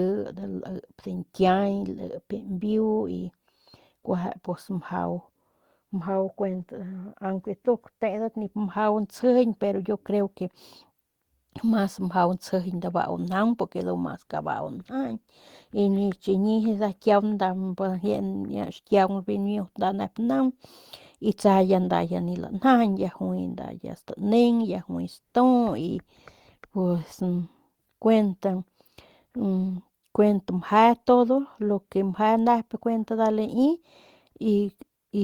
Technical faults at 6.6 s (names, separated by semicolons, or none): lost packet rebuilt from error correction